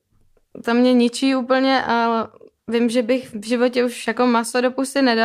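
No technical fault can be heard anywhere in the speech recording; the signal stays continuous and stable throughout.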